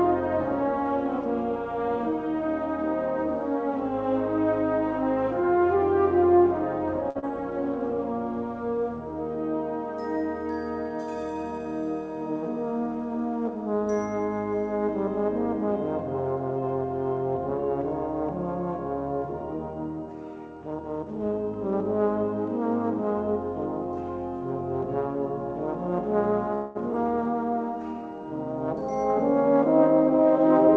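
Short stall from a late packet, 7.10 to 7.32 s: a packet arrived late, the jitter buffer ran dry, and the last sound is held about 51 ms with a faint buzz before resuming where it stopped. Inside it, short concealed packet loss, 7.19 to 7.24 s: 40 ms never arrived, and the receiver continued the previous sound for 34 ms, leaving a brief smear.

Call audio freeze, 26.55 to 26.77 s: the sound hangs for about 200 ms as a fading buzz, likely from packets held up in transit emptying the buffer, then continues with nothing lost. Short concealed packet loss again at 26.93 to 26.95 s: 40 ms drops out, barely patched, as the receiver catches up by roughly 40 ms. Throughout, nothing sounds above 8 kHz, which fits G.722 at 64 kbps.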